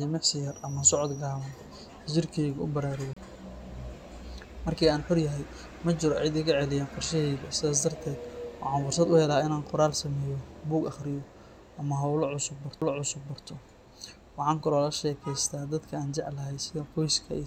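The laser lost its place twice and landed on a different turn of the disc's spiral, a CD skip each time. From 3.13 to 3.17 s the player mutes for roughly 30 ms, heard as a tick before the speech carries on from another point on the disc. At 12.81 s a second skip leaves a much shorter gap of only a few milliseconds, so the tick and the sudden jump in the speech arrive almost together.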